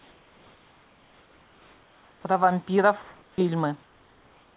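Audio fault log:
0.00–2.24 s, 3.02–3.38 s and 3.83–4.56 s, comfort noise in place of the background: in each pause the room ambience, sitting about 33 to 37 dB below the loudest speech, gives way to a flat, smooth hiss with no texture, and it drops by about 1 to 3 dB. Likely cause is discontinuous transmission: the sender goes quiet when no speech is detected, and the receiver fills the gap with synthetic noise roughly matched to the background, all within a narrowband call path topping out near 4 kHz.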